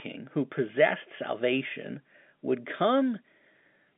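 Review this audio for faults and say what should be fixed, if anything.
Nothing stood out on listening, and nothing here needs fixing; the narrow telephone band, with no content above about 3.7 kHz, is simply how G.711 telephone coding carries speech.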